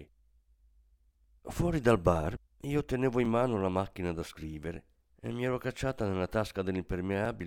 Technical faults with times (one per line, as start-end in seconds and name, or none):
1.24-7.25 periodic USB or driver dropouts